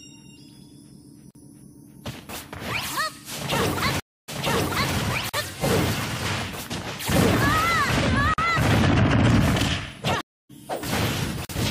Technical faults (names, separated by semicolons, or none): gap between chunks; stream reconnect